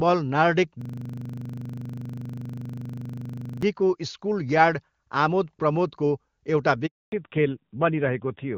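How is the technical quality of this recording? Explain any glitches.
The recording has three glitches: a long stuttering freeze near the start, a brief dropout late on, and a loss of high frequencies for the final stretch. Before the fallback, the wideband HD Voice sound shows little or no codec damage.

From 0.82 to 3.63 s there is a system hang loop. The driver stalled while the audio hardware kept replaying one 40 ms slice about 70 times, producing a 25 Hz machine-gun stutter. The waveform shows identical repeating blocks, and the spectrogram shows evenly spaced vertical stripes.

From 6.86 to 7.12 s a handover gap silences the sound for 260 ms. The call was switching networks and no speech frames arrived during the switch, so that content is lost. It appears as a flat line in the waveform and a blank column in the spectrogram.

At 7.12 s the call falls back to narrowband and stays there to the end. 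Nothing above 4 kHz remains, so the sound turns duller and rougher, which fits a switch from AMR-WB to a low-rate AMR-NB codec around 7.4 kbit/s. On a spectrogram the upper band is cut off sharply at 4 kHz.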